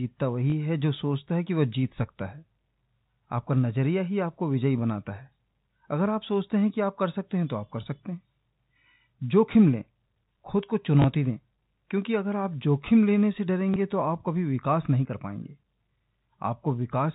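Packet loss with last packet repeated occurs at 0.50–0.52 s, 11.02–11.04 s and 13.74–13.76 s. Each time a single 20 ms packet went missing and the receiver replayed the previous one, so the repeat sounds like a small blip within the telephone-band G.711 sound.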